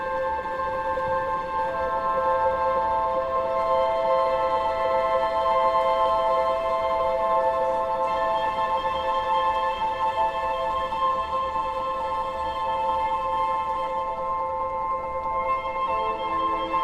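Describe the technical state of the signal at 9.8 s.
At 9.8 s the signal is intact, with no dropout, distortion or other fault to be heard at that moment.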